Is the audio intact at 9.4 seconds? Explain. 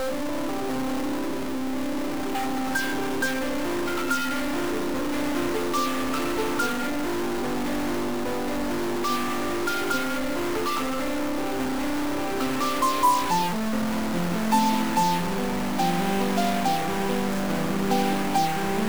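No. At 9.4 seconds, as across the whole clip, a stuck bit adds harsh, buzzy distortion. One data line likely sticks, shifting about half the samples by a fixed step of roughly -25 dBFS. Unlike clipping, it also fills quiet gaps with noise.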